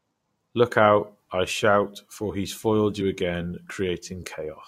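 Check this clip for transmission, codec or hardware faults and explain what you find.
There is one codec fault: compressed frames skipped at 3.0 s, just after "shout for he's foiled." A couple of damaged or missing frames go unplayed, so the speech jumps ahead by about 40 ms.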